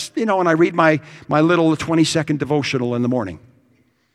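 No technical faults can be heard anywhere in this speech recording. Nothing breaks up, drops out or distorts at any point.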